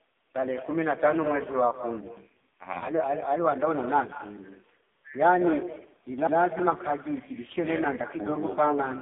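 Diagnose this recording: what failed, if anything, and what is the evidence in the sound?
The far end's call processing failed: there was no echo canceller on a loudspeaker phone, so its microphone picked up the playback and sent it straight back. Throughout the clip every phrase is followed, roughly a fifth of a second later, by a copy about 12 dB quieter. The copy sounds thinner because it crossed the far room and passed through the network twice. This is echo with no canceller.

The codec stage shows heavy damage from the AMR narrowband mobile codec. The band is confined to about 200 Hz to 3.6 kHz from start to finish, with nothing above 3.6 kHz, so sibilants and airiness are gone. The speech has a buzzy, synthetic edge, as the codec rebuilds it from a vocal-tract model and a few excitation pulses per subframe. That degree of roughness points to AMR-NB at one of its lowest bitrates, around 5.15 kbps.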